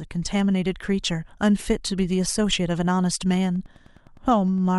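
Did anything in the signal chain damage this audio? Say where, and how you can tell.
Yes, there's Wi-Fi interference getting into the analogue wiring from 3.25 s to the end at 4.78 s. You can hear steady ticking about every 102.4 ms, roughly ten a second, sitting well under the speech. A nearby radio's beacon bursts are being rectified by the circuit and leaking in.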